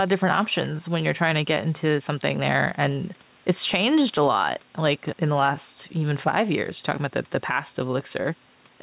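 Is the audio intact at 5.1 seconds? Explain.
No. Gain pumping runs throughout: the gain ducks around 5 dB under loud sounds, squashing loud and soft parts closer in level, likely from a fast limiter on excessive gain. A noise gate would silence the pauses instead.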